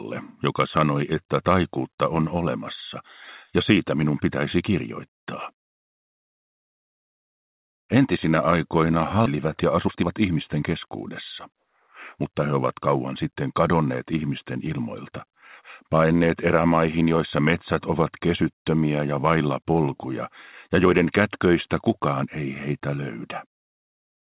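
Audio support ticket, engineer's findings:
Skip ahead, 9.26–9.28 s. Audio jumps forward with basically no gap; about 0.7 s just gone, both sides butted together. Jitter buffer, probably overflowed and dumped the backlog when late audio piled up. Latency drops by the same amount.

Jitter buffer speed-up, 9.35–10.88 s. Sounds rushed, pitch unchanged, running about 13% fast. Buffer still overfull after the skip, so it's snipping out tiny pitch-period chunks back to back, roughly 0.2 s trimmed overall. 12.22–12.89 s: same again, milder, about 7% fast, maybe 70 ms removed.

Background: everything above 4 kHz is missing, which points to a G.711 mu-law narrowband call path.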